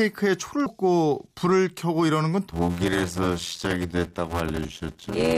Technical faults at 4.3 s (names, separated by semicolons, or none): block size mismatch (padded)